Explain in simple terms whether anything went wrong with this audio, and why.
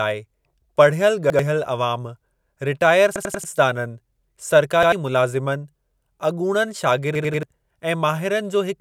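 The speech stutters four times because of a repeated buffer. The playback device didn't receive fresh audio in time, so it replayed the last chunk it had, a piece of about 93 ms, which fits a 4096-sample buffer. At 1.30 s and 4.83 s that chunk plays twice. At 3.16–3.44 s and 7.15–7.43 s it repeats three extra times, giving a longer stammer. Each repeat has a hard join, and the speech that should have played there, roughly a tenth to a third of a second each time, is missing.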